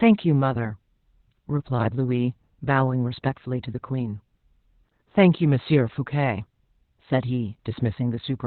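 Throughout, heavy Opus voice compression in narrowband SILK removes sound above 4.3 kHz. The spectrogram shows a hard ceiling there, and the speech comes out muffled and hoarse, which fits roughly 8 kbps.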